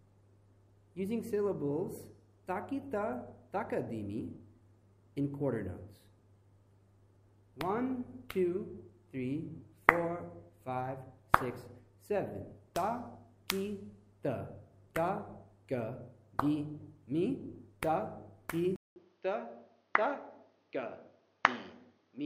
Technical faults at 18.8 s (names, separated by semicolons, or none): input switched to a poorer device